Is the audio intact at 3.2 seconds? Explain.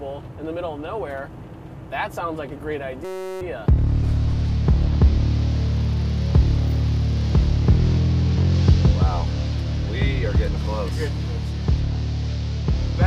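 No. From about 3.05 to 3.41 s the sound gives way to a steady, mechanical buzz pitched at around 188 Hz. It is a system hang loop. The computer or its audio driver stalled while the playback hardware kept replaying the same 5.33 ms slice of its ring buffer, a length that fits a 256-sample buffer. That tiny slice repeats dozens of times, so the repetition fuses into a tone rather than a stutter.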